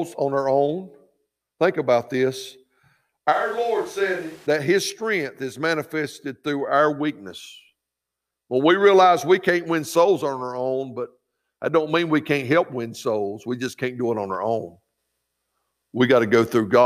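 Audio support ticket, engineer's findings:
Switch to a distant microphone, 3.34–4.45 s: sound goes suddenly roomy and hollow, bass thins, level drops about 10 dB, room noise rises to roughly 25 dB under speech. Likely close mic dropped out, backup far mic took over. Snaps back abruptly.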